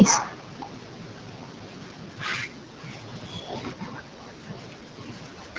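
Throughout, the speech carries AMR wideband (HD Voice) codec damage, rough and raspy, which fits the 8.85 kbit/s mode; a spectrogram shows smeared harmonics below 6.4 kHz and diffuse noise from 6.4 to 7 kHz.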